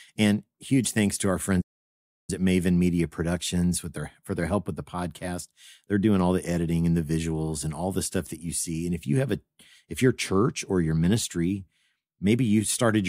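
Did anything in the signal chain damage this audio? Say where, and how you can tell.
Yes. At the playback stage the player most likely ran short of data or had its output thread held up, producing a playback stall. The speech cuts out right after "huge thanks to our" at 1.61 s and the output sits silent until 2.30 s, a gap of about 670 ms. The audio breaks off mid-phrase rather than at a natural pause, and the long dead stretch before it resumes is the typical sign of an output buffer running dry.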